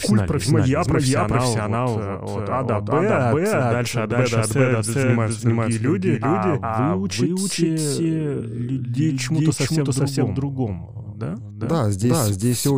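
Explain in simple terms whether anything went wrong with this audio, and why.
Throughout, the speech repeats itself about 0.4 seconds later, just as loud. This is a doubled audio track, likely captured twice with one copy arriving through a slower path.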